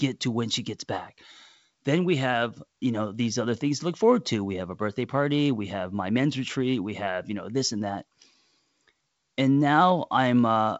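No faults found; the speech comes over a G.722 wideband link at 56 kbit/s, with nothing above 7.7 kHz and only light coding noise.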